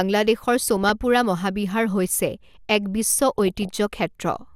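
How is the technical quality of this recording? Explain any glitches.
The speech is marred twice by DAB burbling. From 0.64 to 0.90 s, and again from 3.39 to 3.69 s, a burbling patch of short noise blips sits over the speech. Weak digital radio reception let bit errors slip past error correction into the MP2 audio, at a rate of only a fraction of a percent. Corrupted samples then put short blips of noise into individual sub-bands. The density of the disturbance points to roughly a dozen to twenty damaged frames per burst.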